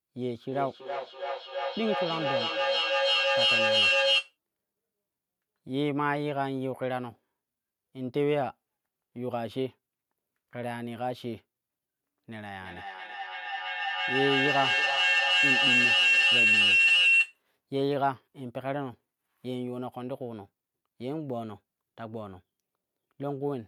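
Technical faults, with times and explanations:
0.45–4.37 s, feedback echo between two devices: a second device in the room replays what the other device's microphone sent, and that microphone picks it up again. Each phrase recurs roughly every 300 ms, thinner and more ringing, and the repeats pile up to about 5 dB above the speech.
12.5–17.4 s, feedback howl: the microphone-to-loudspeaker loop gains level on every trip, so the repeats grow instead of fading and narrow to a tone near 3 kHz. The tone peaks about 7 dB above the speech and stops at 17.4 s.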